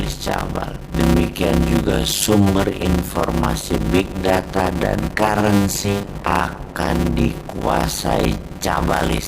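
From start to finish, a block size mismatch (padded): one stage hands over shorter blocks than the next reads, which fits 256 samples written into 480-sample blocks, leaving the rest of each zero-filled. That gap repeats as a 100 Hz buzz, and the sound runs at 0.533 times normal speed, with pitch roughly unchanged.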